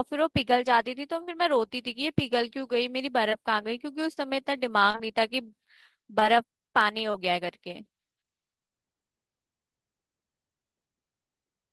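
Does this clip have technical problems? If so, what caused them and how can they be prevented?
Yes. Short concealed packet loss occurs at 1.23, 3.29, 4.13, 4.90, 6.20 and 7.11 s. Each time, 20 to 40 ms of speech reached the decoder too late. The receiver extended the preceding sound to cover the gap, leaving a brief smear or wobble. A steadier network connection or a deeper jitter buffer would prevent it.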